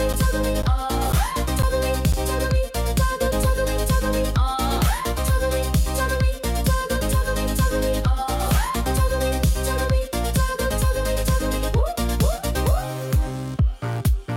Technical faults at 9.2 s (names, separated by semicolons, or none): none